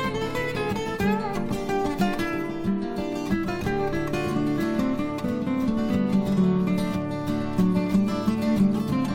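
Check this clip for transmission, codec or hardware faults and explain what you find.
No transmission, codec or hardware faults can be heard anywhere in this clip. There is nothing to report.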